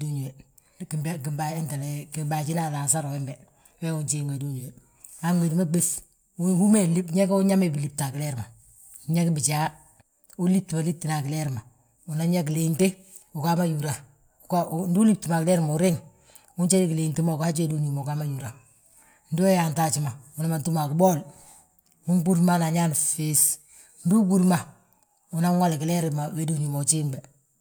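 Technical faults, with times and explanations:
Nothing technical goes wrong anywhere in this recording, so there's nothing to flag.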